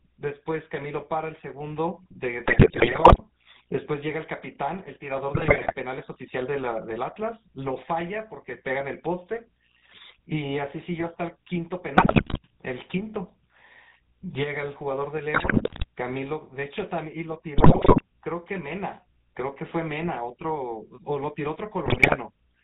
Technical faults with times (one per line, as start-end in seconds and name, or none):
0.00-22.63 GSM full-rate codec
2.44-3.21 GSM bit errors
5.34-5.75 GSM bit errors
11.96-12.38 GSM bit errors
15.34-15.85 GSM bit errors
17.58-18.02 GSM bit errors
21.86-22.16 GSM bit errors